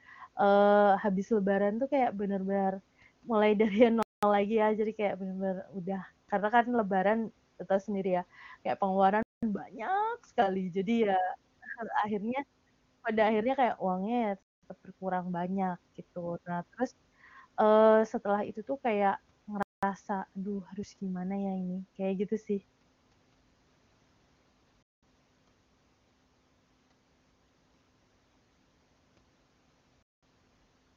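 At 4.03, 9.23, 14.43, 19.63, 24.83 and 30.03 s, the speech drops out for 0.2 s. These are gaps between chunks. The audio arrives in 5 s pieces, and silence is inserted at each join. Nothing is lost, but the flow breaks regularly.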